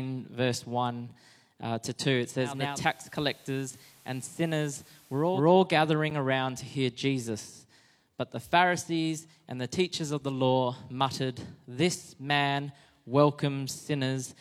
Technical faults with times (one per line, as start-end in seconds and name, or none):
2.38-5.52 digital radio blending to analogue
6.10 block of digital silence